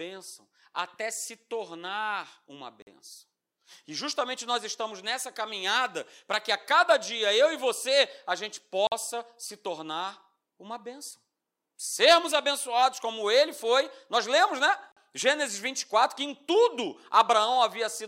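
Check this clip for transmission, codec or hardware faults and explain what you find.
The speech has one fault, a gap between chunks, heard three times: at 2.82, 8.87 and 14.92 s, each about 48 ms long and 6.05 s apart. The audio arrived in 6-second chunks, and a short stretch of silence sits at each join, so nothing is lost but the flow breaks. The result is a brief hard-edged hole. A waveform shows a flat near-silent line with abrupt edges, and a spectrogram shows a narrow, full-height blank stripe.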